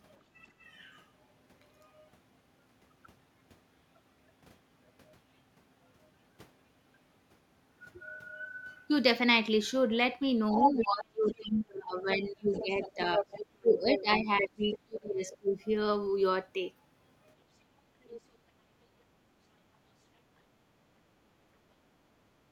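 At 0.48 to 0.59 s the room background dips by about 15 dB: background gated by the echo canceller, which clamped the microphone while the loudspeaker played. On a waveform the noise floor briefly narrows; a spectrogram shows a short vertical band of faded noise across all frequencies.

From 10.53 s a second voice enters at 10.53 to 11.35 s, at roughly the same level as the talker. This is the other side's voice leaking through, likely loudspeaker echo the canceller failed to subtract. It returns from 12.11 to 14.77 s about 10 dB down, at 15.32 to 15.37 s about 25 dB down, and at 18.04 to 18.21 s about 20 dB down. A spectrogram shows a second harmonic pattern interleaved with the main one.

Overlapping this, from 10.53 to 15.59 s, the talker's speech dips in pieces, roughly 3 s in total and as deep as about 25 dB. This is speech suppressed in double talk, likely the canceller turning down both voices when it could not tell them apart. 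The waveform envelope shows notches within the talker's syllables.

At 21.75 to 21.88 s the background gating recurs, shallower at about 8 dB, seen as a faint brief dip in the noise floor.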